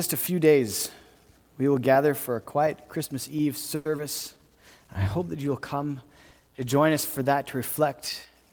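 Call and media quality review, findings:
Call audio freeze, 3.75–3.87 s: last sound stretched into a fading buzz or hiss for about 100 ms, nothing lost afterward. Likely jitter buffer underrun from delayed packets, with playout delay growing by 100 ms.

Short concealed packet loss, 3.97–4.00 s: brief smear where 40 ms never reached the decoder. Concealment filled only part of it, cutting delay by about 30 ms.

Call bitrate drop, 4.17–7.37 s: rough, muffled, band-limited sound. Encoder target fell from 64 to 19 kbps and held the floor for about 3.1 s before recovering.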